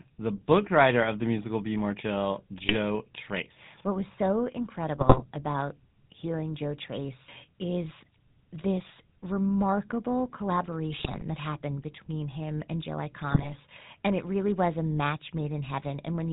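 From the start the speech sounds buzzy and gravelly, with nothing above 4 kHz. That is the GSM full-rate codec, which rebuilds the voice from a vocal-tract model driven by coarse, regularly spaced pulses. Squawks, pops and gargling break through at 2.58 to 2.76 s, at 4.97 to 5.24 s after "was so", at 10.97 to 11.22 s just before "that happened between him", and at 13.30 to 13.50 s. These are GSM bit errors: corrupted filter, pitch or gain values distort the spectrum or level of the affected frames.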